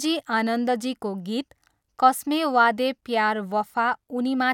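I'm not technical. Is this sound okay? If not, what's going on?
Yes, nothing in this speech recording registers as a technical problem.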